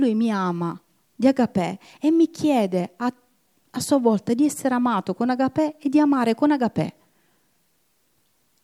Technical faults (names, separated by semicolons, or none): none